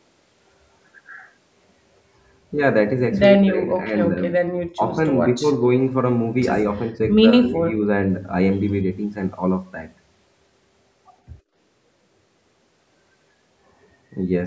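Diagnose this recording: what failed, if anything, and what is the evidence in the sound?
Speech suppressed in double talk, in call processing: the speech dips at 3.35–3.92, 4.10–4.23, 4.39–4.55, 4.73–4.96, 5.37–5.44 and 7.21–7.84 s. The drops range from slight to nearly silent. They show as pinched gaps in the waveform and faded columns on the spectrogram. The likely cause is the echo canceller turning the talker down while the far side spoke.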